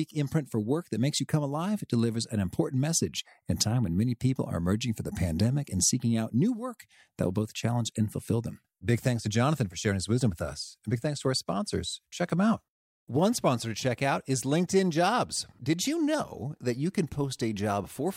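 No technical faults can be heard anywhere in this speech recording. Nothing in the audio points to a problem in how it was captured or delivered.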